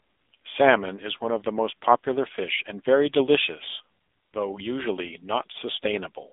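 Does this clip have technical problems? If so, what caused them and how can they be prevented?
Yes. Throughout, the speech carries AMR narrowband mobile codec damage: a 250 Hz to 3.6 kHz line band, nothing above 3.7 kHz, and a buzzy, synthetic texture, which points to a low mode near 7.4 kbps. Unlike simple band-limiting, the vocal-tract model audibly coarsens the voice itself. To prevent it, record or route the call over a wideband or higher-bitrate path instead of narrowband mobile coding.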